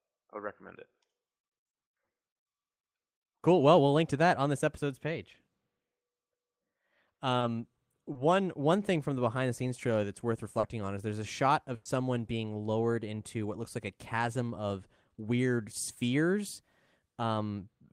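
At 7.39 s, 8.13 s just before "one thing from the", and 10.59 s after "scenes trailer that's worth", short concealed packet loss replaces 20, 20 and 40 ms of speech with extrapolated sound. Each is a brief smear or wobble. On a spectrogram, the harmonics flatten momentarily.

From 11.75 to 11.87 s, after "is there's a shot", a burst of packet loss leaves about 100 ms filled by continuing and fading the last sound. The speech resumes at "being lowered into what" with that stretch gone. A spectrogram shows a smeared, decaying band with no gap of silence.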